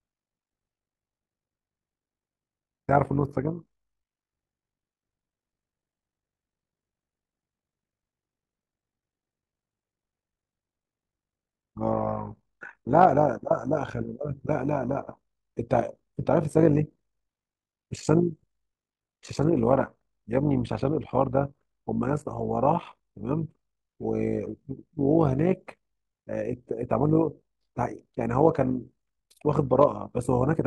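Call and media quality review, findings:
Overlap-add ripple, whole clip: rough robotic tremolo on the speech at around 50 Hz, level swinging by about 11 dB each cycle. Probable component: frame-based processing stage. Windowed frames overlap-added without constant-gain summing, so level pulses once per frame.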